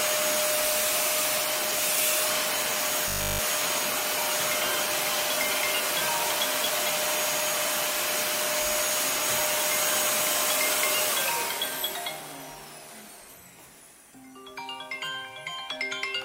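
From 3.08 to 3.40 s the audio turns into a rigid, metallic 50 Hz buzz: robotic sound from repeated short buffers. Essentially the whole stretch is a 20 ms fragment looped over and over, likely because new audio stopped arriving in time and the real material was skipped.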